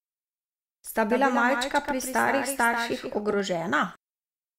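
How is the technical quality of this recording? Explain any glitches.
The recording has one fault. From 1.10 to 3.40 s there is a doubled audio track, likely from a slower second capture path or an edit holding two copies out of step. A dry, full-band copy trails about 150 ms behind at about 5 dB lower, and starts and stops abruptly.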